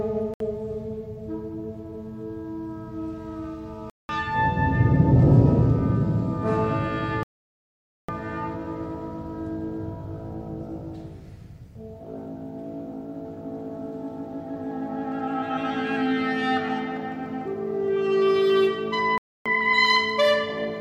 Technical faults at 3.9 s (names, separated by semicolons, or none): Bluetooth dropout